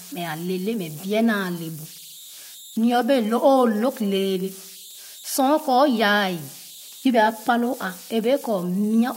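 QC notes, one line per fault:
Throughout, converter idle tones: a whistle around 4 kHz in pauses and grainy noise under the speech, about 22 dB below the signal, from undithered delta-sigma conversion.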